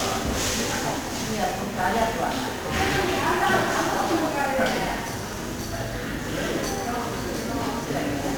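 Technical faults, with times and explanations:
Throughout, 1-bit DFPWM compression: the whole thing is coated in heavy fuzz and crackle, with the top end lost under hiss. Each sample gets just one bit nudging an adaptive level up or down, which fits a 48 kbps stream.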